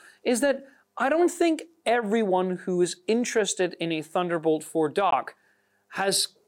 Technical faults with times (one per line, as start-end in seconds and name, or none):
5.11-5.14 Bluetooth dropout